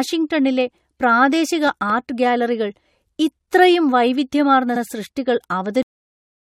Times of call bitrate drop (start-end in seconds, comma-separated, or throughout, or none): none